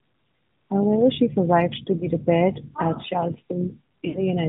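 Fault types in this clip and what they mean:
AMR narrowband mobile codec: the speech went through the 8 kHz mobile codec, so nothing above 4 kHz remains and the sound is plainly buzzy, which fits the 10.2 kbps mode.
Lost AMR speech frames: corrupted frames made the decoder repeat old settings with fading gain, giving a brief warble after "she survived to" and a longer fade-out near 4.1 s.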